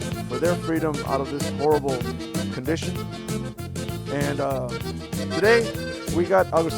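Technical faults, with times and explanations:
No technical faults can be heard in this recording.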